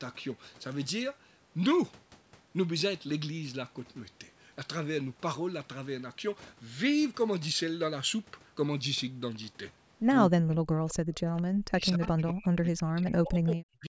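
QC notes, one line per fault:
10.29–10.95 s and 11.69 s to the end, speech suppressed in double talk: the speech sinks and breaks apart, falling by up to about 40 dB, with roughly half a second affected in the first stretch and about two seconds in the second. This is likely the echo canceller meeting both sides talking at once. Unable to separate the near talker from the loudspeaker echo, it pulled down everything, so the speech dips and drops out in pieces.
10.89–10.94 s and 11.38–11.42 s, echo leak: faint, brief scraps of the speech return 221 ms late, at about 25 dB and then about 30 dB below the direct sound, short rather than sustained. This is likely a loudspeaker-side echo canceller letting part of its microphone pickup slip through and sending it back down the line.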